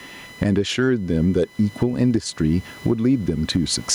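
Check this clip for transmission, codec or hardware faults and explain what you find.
Two faults run through the whole speech clip: computer activity noise and gain pumping.

Computer activity noise is a faint buzz pulsing at around 1 kHz, roughly 35 dB below the speech. Processor or peripheral load disturbs the shared audio ground, so it follows computer activity rather than the speech, unlike room noise.

Gain pumping pulls loud and soft parts closer in level and squashes the sound, swinging around 15 dB. The likely cause is excess input gain clamped by a fast limiter. The background is room noise about 41 dB down.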